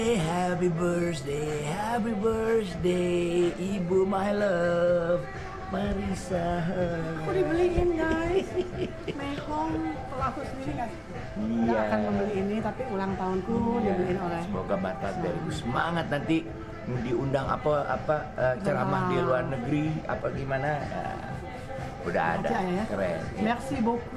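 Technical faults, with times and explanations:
Nothing stood out as a technical problem on listening.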